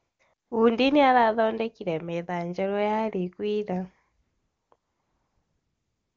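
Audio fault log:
0.00–0.19 s, 0.33–0.51 s, 4.21–4.71 s and 4.75 s to the end, AMR comfort noise: the phone's voice activity detection judged these stretches silent and stopped sending speech frames. The receiving end filled each gap with synthetic noise built from a rough estimate of the background's level and spectrum. The real ambience is replaced by a smooth, steady hiss that switches in and out against the clean wideband speech.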